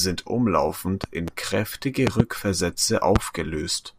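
Loud pops land at 1.04–1.30 s and 2.07–2.22 s as quick double pops, then singly at 3.16–3.18 s, peaking about 15 to 20 dB above the speech, which carries on underneath. Likely a voltage step or pulse, from a plug, switch, static or driver glitch, entering the signal chain.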